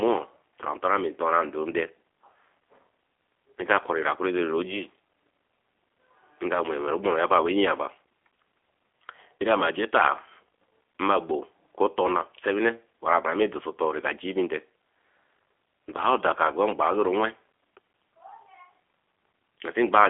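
Speech passed through a G.729 codec, likely G.729A at 8 kbit/s, rebuilds the sound from pulses and filters, leaving it rough and synthetic, with nothing above 3.8 kHz.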